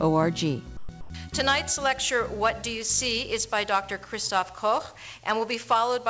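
At 0.77 to 0.89 s and again at 1.01 to 1.10 s, the background is replaced by comfort noise: steady, featureless hiss, about 9 dB quieter in the first gap and about 2 dB in the second, likely from discontinuous transmission filling pauses with synthetic noise. On a spectrogram the textured background turns into a smooth, even wash, capped like everything else at 8 kHz by the call codec. The waveform shows a flat, uniform band.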